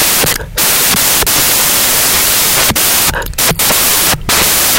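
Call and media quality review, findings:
Samples built from the wrong bytes, throughout: loud white noise over the speech. Decoder byte order or alignment off, so low bits become high.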